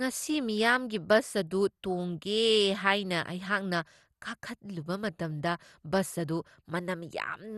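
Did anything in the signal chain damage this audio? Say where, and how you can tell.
Yes, at the codec stage, and the damage runs through the whole speech clip. The sound is dull, with nothing above 12.2 kHz. It carries a gurgling, granular roughness that is plainly audible. The likely cause is MP2 compression at a low rate, around 64 kbps. MPEG Layer II divides the spectrum into 32 sub-bands and shares out bits. Starved of bits, it drops the top bands and quantises the rest coarsely, which gives this grainy texture.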